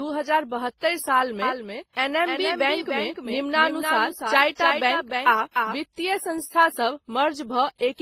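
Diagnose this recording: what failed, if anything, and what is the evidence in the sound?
Two faults here, both up in the processing chain. The speech carries a layered mix of codec artefacts that sounds like transcoding between lossy codecs: artefacts from one low-bitrate pass sitting under the artefacts of a second. Nothing comes through above 18.2 kHz. The first stage left damage, and the next stage spent bits coding that damage as if it were signal. A low-rate WMA-type encode followed by an Opus pass at around 32 kbit/s is the likely chain.

From 1.42 s to 5.76 s there's a doubled audio track. A second full-band copy trails the original by around a third of a second, roughly 5 dB down. It has no decay tail and no room colour, and it cuts in and out abruptly at both ends. A real echo wouldn't behave that way. It points to a duplicate capture path or an edit layer, likely in storage or mixing, holding two copies out of step.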